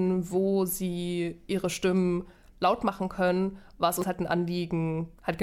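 At 4.02 to 4.04 s there is a brief burst of damaged data in a compressed stream, a glitch of about 20 ms. A stretch of the encoded bitstream is corrupt at that point, so the decoder cannot interpret the affected frames correctly and loses frame sync until it finds the next valid header. The result is a short, unnatural blip that cuts across the audio before normal decoding resumes.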